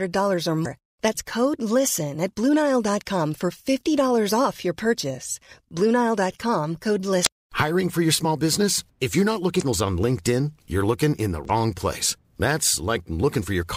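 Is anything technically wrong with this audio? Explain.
Yes. Damaged data in a compressed stream disrupts this speech at 0.62–0.66, 7.23–7.27, 9.58–9.62 and 11.46–11.50 s. Corrupted frames throw the decoder off sync, leaving a brief glitch each time.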